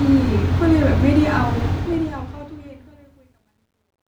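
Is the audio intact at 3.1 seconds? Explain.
No. At 3.1 seconds the speech sits inside truncation distortion on a fade, which runs from 1.68 to 4.18 s and is worst from 2.79 to 4.19 s. As the fade-out lowers the level without dither, the quantisation grid is too coarse, consistent with an 11-bit word length. The quiet tail sounds gritty. The waveform shows blocky square steps, and the spectrogram shows harmonic smears.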